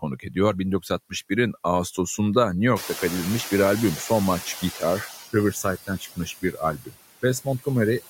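Right from the start there are noise suppressor artifacts across the whole speech clip. The suppressor pulls down whatever bands it judges to be steady background, by about 14 dB, working frame by frame. So the noise floor dips away in the gaps and swells back under the talking.

From 2.75 to 5.15 s you can hear the noise suppressor catching up. The room noise jumps by about 20 dB around the 3 s mark and ends up only about 14 dB under the speech, and the suppressor's noise estimate doesn't keep pace. The louder background comes through with little taken off at first, then sinks gradually as the estimate adapts over roughly 2.4 s, finally settling at about 10 dB of reduction.

Then there's speech cut by the noise suppressor, twice. Between 5.87 and 6.62 s it mistakes parts of the talking for noise and turns them down along with the background, by as much as about 21 dB, over something like a third of a second in total. 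A second, shorter bite lands between 6.78 and 6.95 s, dipping about 15 dB. In both spots the sound goes faint and swallowed.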